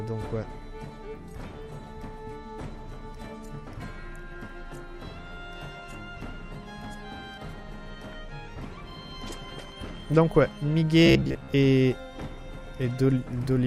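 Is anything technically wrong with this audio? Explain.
Yes. From 11.06 to 11.53 s there is robotic sound from repeated short buffers. Starved of new data, playback likely loops the last 15 ms or so in place of about half the audio. This forces a rigid, metallic 66.8 Hz buzz, visible as a comb of evenly spaced harmonic lines on a spectrogram and a strictly periodic waveform.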